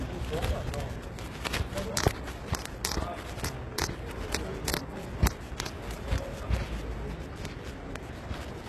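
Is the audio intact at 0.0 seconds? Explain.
No. From the very start and through the whole clip, the treble sounds gritty and metallic, with nothing above about 12.3 kHz. This is likely HE-AAC compression at a rate near 16 kbps, rebuilding the upper band by copying lower bands upward.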